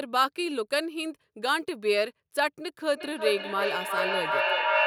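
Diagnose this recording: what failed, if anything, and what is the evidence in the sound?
From 2.93 s onward, speech repeats roughly every 0.4 s, thin and ringing, at full speech level: feedback echo between two devices in call processing.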